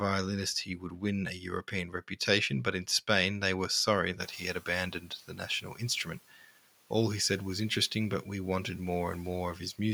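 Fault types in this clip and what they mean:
Speech cut by the noise suppressor: the suppressor mistakes parts of the speech for background and turns them down by up to about 8 to 9 dB. This happens at 0.65 to 1.02 s, at 1.4 to 2.18 s (ending before "but in"), and at 5.0 to 6.45 s. On a spectrogram, faint consonant and word-ending energy fades into gaps. On a waveform, the envelope sags briefly.
Noise suppressor catching up: the room noise jumps by about 25 dB near 4 s, and the suppressor's estimate lags behind it. Just after "they were sorry", from 4.21 to 4.54 s, the noise passes with little reduction, then sinks by about 7 dB over 330 ms. A spectrogram shows a bright broadband noise floor that then dims. A waveform shows a raised floor tapering down.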